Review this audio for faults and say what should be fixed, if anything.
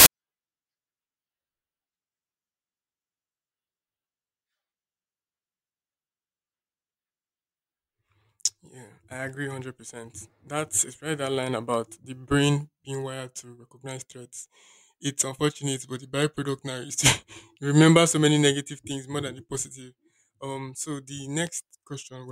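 From 0 to 0.06 s the speech opens with a burst of very loud white noise: file tags played as audio, where an embedded cover picture's compressed bytes are read as samples. The waveform shows a solid loud block; the spectrogram shows flat broadband energy with hard edges. Make the decoder skip tag and picture blocks before the audio frames.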